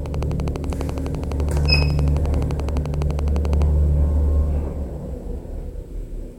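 From 0.06 s to 3.63 s a train of clicks runs over the sound: around forty sharp, near-identical pulses at a steady 11.8 per second, heard as an even ticking that continues through the quieter moments and peaks roughly 10 dB above the audio itself. The likely cause is interference from nearby equipment or a faulty connection or power supply. On a waveform they stand out as narrow spikes at a fixed spacing, and on a spectrogram as evenly spaced thin vertical lines spanning the whole frequency range.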